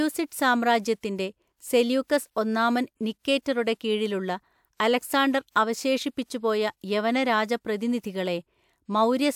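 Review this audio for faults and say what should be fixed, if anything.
Nothing needs fixing: the speech signal holds steady throughout, with no audible technical faults anywhere in it.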